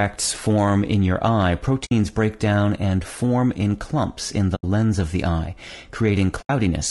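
Throughout, the speech sounds rough and grainy, with noise between the harmonics. This is likely low-delay AAC compression, fitting AAC-ELD at around 32 kbps.

AAC frame loss with muting comes next. The decoder zeroed the missing frames, so the sound fades into brief holes. One lasts about 60 ms at 1.85 s, after "form in your eye". Two more last about 80 ms: one at 4.55 s, before "of the eye", and one at 6.41 s.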